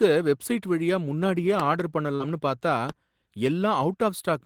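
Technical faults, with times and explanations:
1.60 to 1.82 s, loud pop: two sharp pops in quick succession sit on top of the speech, which continues underneath, peaking roughly 10 dB above it. This is likely a sudden voltage step, such as a switch, plug or static discharge. A waveform shows two tall isolated spikes; a spectrogram shows two thin full-height vertical lines.
2.15 to 2.23 s, short concealed packet loss: about 40 ms of audio never arrived, and the receiver filled roughly 43 ms by extending the preceding sound before blending back into the real signal, leaving a brief smear or wobble. A spectrogram shows harmonics or noise stretched flat across the gap, and the waveform shows a smooth, repetitive patch.
2.89 to 2.91 s, loud pop: a single sharp pop, about 10 dB above the speech, lands on top of the speech without interrupting it. The cause is likely another abrupt electrical pulse that the following circuits shaped into a short click. 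It shows as one narrow spike on the waveform and a single thin broadband stripe on the spectrogram.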